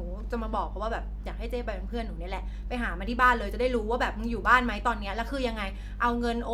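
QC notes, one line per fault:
Throughout, mains hum: a steady 50 Hz drone sits close under the speech, only about 5 dB down, as power-line current leaks in through a ground loop or nearby transformer.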